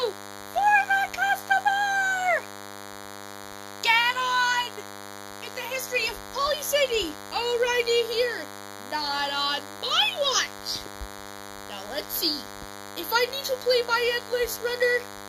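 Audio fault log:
throughout, DECT cordless phone buzz: a nearby DECT handset or base station transmits a short radio burst 100 times per second, and the audio circuitry rectifies each burst, so a steady, thin buzz at 100 Hz, rich in harmonics, sits roughly 15 dB below the sound.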